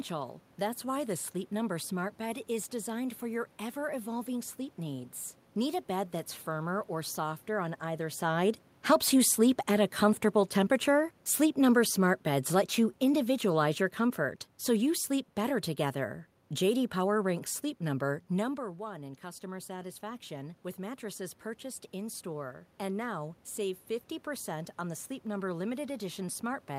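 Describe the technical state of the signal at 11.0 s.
At 11.0 s the speech is partway through a gradual sink in level: the voice and the room noise behind it fade together, which is the sign of automatic gain falling. The drop runs from 9.13 s to 15.65 s and totals about 7 dB. The automatic gain control judged the input too loud, or its background noise too strong, and is pulling its gain down gradually, so everything passing through it, background included, loses level at the same rate.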